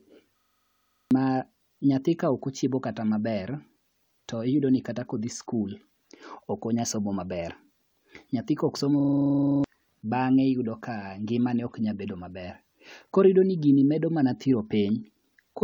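Speech clip with a system hang loop twice: the system froze while the hardware replayed one 42.7 ms buffer (fits 2048 samples), giving a 23.4 Hz machine-gun stutter from 0.38 to 1.11 s and from 9.00 to 9.64 s, just after "nyathi koksomo". Each loop loses about 0.7 s of audio.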